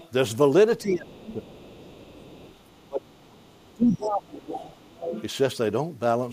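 At 0.0 to 0.11 s a faint second voice sits under the speech, around 25 dB down. This is the other side's voice leaking through, likely loudspeaker playback that the echo canceller failed to remove fully from the microphone.

From 0.81 to 1.75 s the speech is intermittently pulled down, by as much as roughly 20 dB and for about 0.7 s in total. This is speech suppressed in double talk, likely the canceller attenuating everything while it could not tell the talker from the echo.

Overlapping this, from 1.24 to 3.26 s, the other side's voice leaks through again at a low level, around 30 dB below the speech, which is probably residual echo the canceller did not cancel.

From 2.87 to 4.63 s a longer stretch of double-talk suppression follows, with dips reaching roughly 25 dB and about 1.5 s affected, likely the same attenuation as before.

From 3.7 to 5.23 s the leaking voice is strongest, only about 15 dB under the speech, which is likely residual echo the canceller did not remove.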